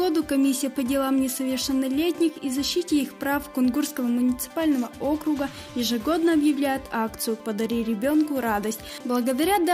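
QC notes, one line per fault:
No faults heard anywhere in this clip.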